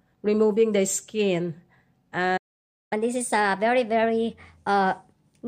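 The audio runs fine until 2.37 s and then cuts to silence: a playback stall lasting about 0.54 s, with the sound picking back up at 2.93 s. That kind of dead gap in mid-flow is most likely the player starving for data or its output thread getting blocked, so nothing reaches the output until it recovers. Right after it comes back, from 2.93 s to the end, there's catch-up at higher speed. The player works through its backlog at 1.15 times normal speed by resampling, so everything sounds rushed and pitched up by about two semitones. That lift is the telltale sign of resampling rather than time-stretching, because speed and pitch rise together. The clip ends before playback settles back to normal rate, so the raised pitch hangs on right to the last moment.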